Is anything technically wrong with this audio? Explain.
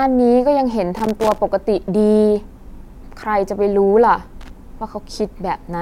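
Yes. Loose connector crackle occurs at 0.96–1.38 s and 4.41–4.50 s: a worn contact intermittently breaks the speech path, giving scratchy bursts that appear as jagged waveform dropouts and vertical broadband streaks on a spectrogram.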